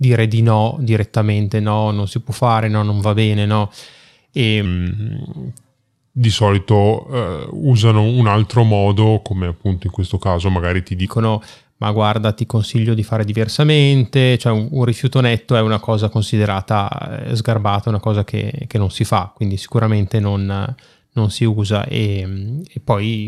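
From 4.66 s to 11.05 s a section at the wrong speed plays back at 0.873 times its original rate. Pitch and tempo drop together, about two semitones lower, so the speech sounds deeper and slower, likely from this portion being clocked at the wrong rate.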